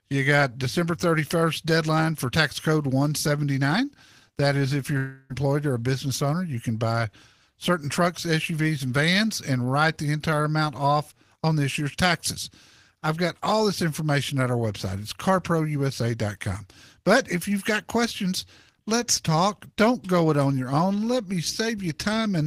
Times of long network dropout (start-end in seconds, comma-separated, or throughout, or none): 4.97-5.32